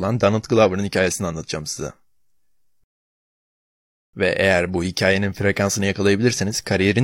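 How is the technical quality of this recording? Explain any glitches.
The recording has one glitch. A rebuffering stall at 2.84 to 4.14 s occurs when the player exhausts its downloaded audio and waits, inserting 1.30 s of silence before the speech resumes exactly where it stopped.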